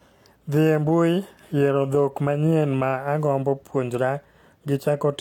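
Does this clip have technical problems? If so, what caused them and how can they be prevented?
Yes, there's hard clipping from 0.63 to 1.04 s and again from 1.65 to 2.90 s. The speech peaks are hitting the ceiling of a stage that can't pass anything larger, so their tops get sliced flat. The overload is only around 0 dB, barely past the limit, so you hear a light crackle on the loudest moments rather than constant fuzz. To prevent it, leave a few decibels of headroom by lowering the input gain before the converter.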